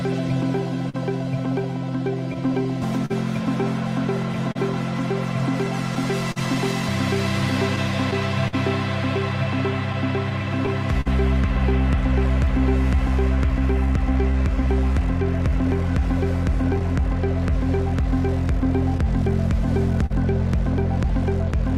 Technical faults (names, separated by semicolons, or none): clock drift between sender and receiver; scattered short gaps; repeated timing corrections